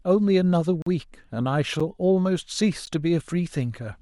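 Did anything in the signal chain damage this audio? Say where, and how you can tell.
Yes. A block of digital silence occurs at 0.82 to 0.86 s, and again at 2.86 s. The first hole lasts about 43 ms, which fits a 2048-sample buffer at 48 kHz. The second is a shorter drop of about 14 ms. Both point to the driver or buffer stage, where the output buffer wasn't filled in time and zeros went out instead. The speech cuts out and back with no fade.

A gap between stream segments appears at 1.80 s. It is a hard-edged hole of about 8.5 ms that interrupts the speech. This comes from the network or playback stage: the time stamps of two consecutive segments don't quite meet, and the player pads the mismatch with silence. Nothing is missing from the speech itself. The timeline has simply gained a few milliseconds of inserted silence at the join.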